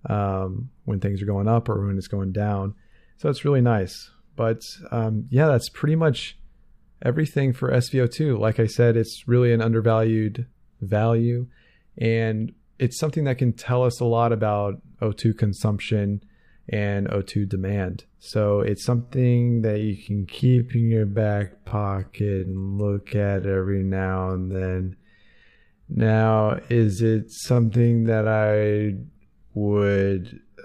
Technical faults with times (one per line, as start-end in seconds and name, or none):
18.95-30.65 time-stretched section